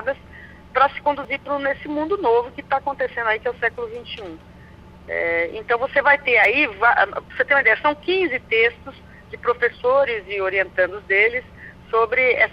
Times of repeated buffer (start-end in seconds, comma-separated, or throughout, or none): 1.24, 6.44